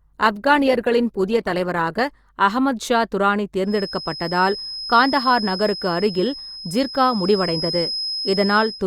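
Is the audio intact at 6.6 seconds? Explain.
No. At 6.6 seconds the speech carries a feedback whistle, a thin, steady tone at 5.1 kHz. It sits about 10 dB below the speech and swells and fades slowly in level. It starts at 3.63 s, right after "அகமது ஷா துரானி", and runs to the end of the clip at 8.86 s. The likely cause is a loudspeaker-to-microphone loop held just at the edge of feedback. That sustains a single frequency without letting it build into a howl.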